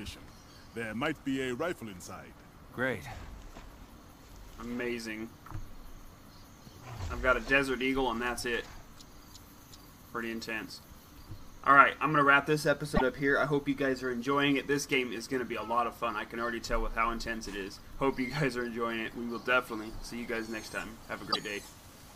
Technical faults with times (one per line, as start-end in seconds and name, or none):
12.95-13.02 broken MP3 bit reservoir
21.30-21.36 broken MP3 bit reservoir